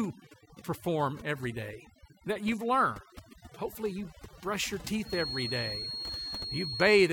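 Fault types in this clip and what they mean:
overdone noise removal: A noise reduction stage was pushed too hard across the whole clip, so frequency bands sitting close to its estimate of the noise floor are pulled far down or cut out entirely, and the quieter parts of the speech go with them. Between phrases the background drops to near silence broken by twinkling specks, while the speech itself has its softer detail stripped away along with the noise.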